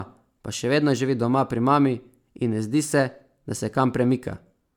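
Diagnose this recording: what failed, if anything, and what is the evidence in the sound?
The speech sounds swirly, hollow and smeared throughout, with blurred consonant attacks and nothing above about 19.9 kHz. This is generation loss at the codec stage, likely from around four successive lossy re-encodes that fit MP3 at 128 kbit/s. Each pass requantised on a shifted frame grid, compounding noise and spectral holes.

At 0.97 s there is a single sharp, broadband tick that has no relation to the speech around it. This is a bit error spike in storage or on a digital link. One flipped bit in a single sample made its value jump by a power of two and then return immediately.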